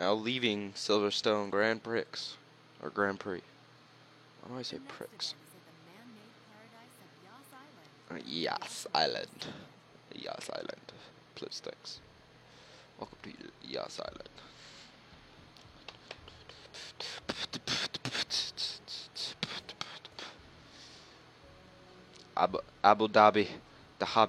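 No technical faults can be heard anywhere in the audio, and the signal holds steady for its whole duration.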